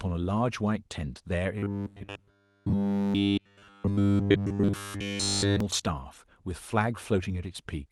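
From 1.58 to 5.60 s the speech turns into a rigid, metallic 100 Hz buzz: robotic sound from repeated short buffers, likely the last 10 ms block being replayed over and over. A spectrogram shows even stripes spaced 100 Hz apart, and the waveform repeats identical 10 ms cycles.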